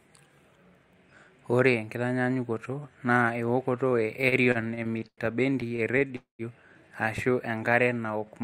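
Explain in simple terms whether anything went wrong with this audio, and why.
Yes, a few things went wrong, all from the network delivering this speech unevenly. Right after "ewokoto e", from 4.21 to 6.13 s, you get repeated stalls (stutter): packets kept arriving late, so the playback ran dry 19 times, with gaps up to 100 ms. The receiver papered over each gap by stretching the last sound, about 445 ms in total. Nothing's lost, but it drags and hiccups.

Then, from 6.16 to 6.42 s, there's a call audio freeze, likely from packets getting held up along the way. The sound hangs, fades, and goes fully quiet for about 130 ms before picking up exactly where it stopped. That adds roughly 232 ms of delay.

Finally, from 7.33 s to the end at 8.43 s, there's a jitter buffer slow-down. The receiver was rebuilding its reserve by repeating tiny slices of sound, so the talking plays at about 90% speed with the pitch unchanged, stretching things by 120 ms.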